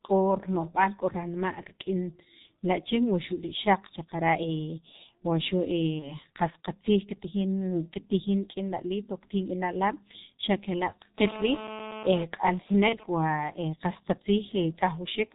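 Throughout, the speech carries heavy G.723.1 codec damage. It is muffled and hoarse, with nothing above 4 kHz. Consonants blur, which fits a 6.3 kbit/s stream.

From 5.99 to 6.15 s, VoIP packet loss is concealed by the speech codec. The decoder stretches the last sound into a buzzy tone or coloured noise that fades, which fits one lost 30 ms frame. The voice stays weak briefly afterwards.

From 11.18 to 12.24 s, GSM phone buzz intrudes. It is a hard, raspy 217 Hz buzz with many harmonics, about 12 dB below the speech. It is steady, as during a call.

At 12.89 to 12.99 s, packet loss concealment recurs. It is shorter and again smeared.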